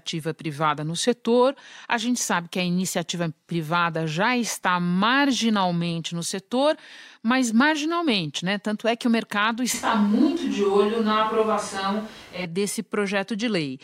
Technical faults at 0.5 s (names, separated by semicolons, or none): none